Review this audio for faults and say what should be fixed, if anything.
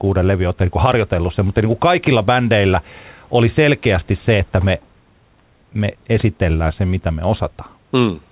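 No faults; nothing to fix.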